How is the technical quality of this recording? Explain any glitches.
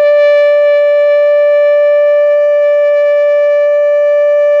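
The music recording has no technical glitches; the signal holds steady throughout with no interruptions or defects in its playback.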